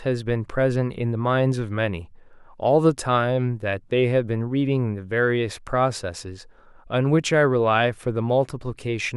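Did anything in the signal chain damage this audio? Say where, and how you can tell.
No, nothing in the signal chain damaged this speech.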